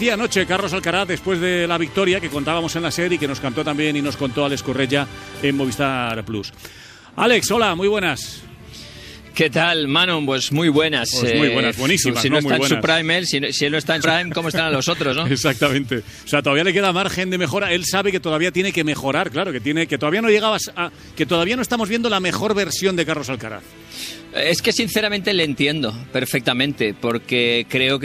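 Right from the start, at about 0.07 s, there's a train of clicks that runs until 5.23 s: around twenty sharp ticks, roughly four per second, at an uneven pace rather than a steady beat. They're all much the same shape and peak at about the level of the sound itself, and they're heard in the gaps too. The likely culprit is electrical interference from nearby gear or a faulty connection or power supply.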